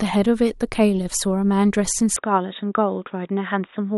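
At about 2.16 s the speech suddenly goes dull and boxy and stays that way to the end, with nothing above 3.8 kHz. There's no gap at the change and no real level jump, just a faint new noise floor. Likely an input switched to a poorer device mid-recording.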